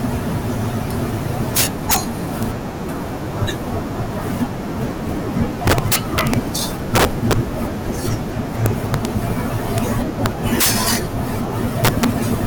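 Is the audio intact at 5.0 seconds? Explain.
Yes, at 5.0 seconds the speech runs on intact, with no dropout, click, distortion or other fault to be heard there.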